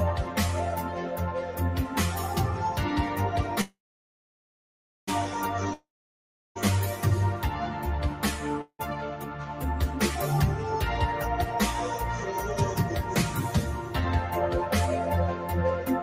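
At 3.61 s the sound stops and a short buzz carries on, then fades. Near-silence holds for about 1.33 s. At 5.09 s the audio resumes exactly where it broke off. This is a call audio freeze. Packets were likely delayed in transit, so the jitter buffer emptied and the receiver padded the gap. Nothing is lost. The whole 1.46 s pause is simply inserted, and everything after it now plays that much later.

From 5.73 s to 6.57 s comes a long network dropout. The audio breaks and the last sound trails off as a fading hiss. About 0.7 s of silence follows. When the sound returns, it has skipped ahead. About 0.82 s of the original never arrives, most likely lost on the network rather than held up. So this gap removes material instead of just delaying it.

A second, much shorter call audio freeze runs from 8.61 s to 8.81 s. The sound hangs for 0.18 s, with only about 70 ms of true silence. It then continues with nothing missing. 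Again the packets were likely held up, and the receiver filled the wait. The result is a brief stall that pushes the rest of the clip slightly later.

From 9.17 s to 9.62 s there is sound cut by the noise suppressor. The suppressor mistakes part of the sound for background noise and turns it down. The level sinks by up to about 5 dB over roughly half a second. The steadier, lingering parts thin out and tail off early. The sharper onsets pass through largely untouched.

From 11.33 s to 15.63 s there is a jitter buffer speed-up. The buffer had built up more audio than it wants to hold. To cut the delay, the receiver trims tiny slices of a pitch period or so, over and over. Around 150 ms goes in total. Playback runs at about 103% speed with the pitch unchanged.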